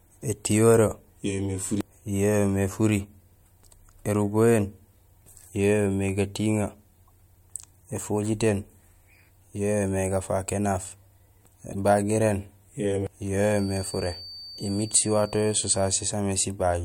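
At 7.08 to 7.10 s a faint blip cuts into the speech, and at 11.72 to 11.75 s a louder chirp follows. Both are a corrupt frame decoded: damaged compressed data was played anyway, misplacing energy in frequency for roughly one frame and then two.

From 13.44 to 16.18 s a thin, steady whistle at 4.6 kHz sits well below the speech, swelling and fading slowly in level. This is likely a feedback whistle, with the speaker-to-microphone loop hovering just short of runaway.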